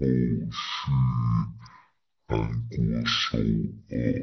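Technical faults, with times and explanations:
Throughout, stereo read as mono: the speech plays at half speed, 0.5 times normal, and a full octave low, down 12 semitones, sounding slow and heavy. Interleaved left and right samples were taken in turn as one channel, so each real frame spans two output samples.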